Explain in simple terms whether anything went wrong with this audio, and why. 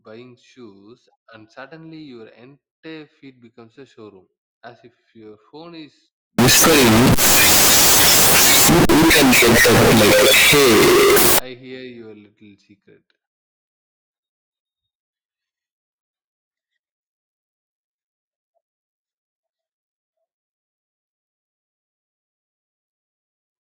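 Yes, something goes wrong from 6.39 to 11.39 s, right after "your phone is": the sound turns extremely loud and harsh, with background noise as loud as the speech. This is likely a float read as integer, where 32-bit float samples get decoded as 32-bit integers. Unlike ordinary clipping, even quiet moments blast out, yet the pitch stays followable.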